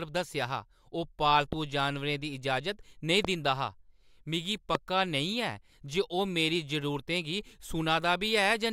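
Loud pops hit this speech recording at 1.53–1.55 s, 3.25–3.27 s and 4.75–4.77 s. Each is a single sharp crack, well above the level of the speech, and the last is the strongest. The speech continues underneath without a break. Each brief voltage step was likely from a switch, static discharge or a driver glitch, added to the signal and shaped into a short thump by the circuits after it.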